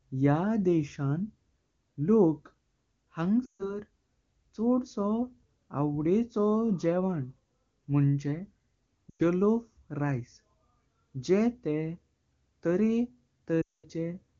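At 3.46 to 3.80 s, 9.10 to 9.22 s and 13.61 to 13.86 s, lost AMR speech frames make the wideband decoder repeat its last good settings with falling gain. The speech drops to near silence within two frames, returning weak or rough.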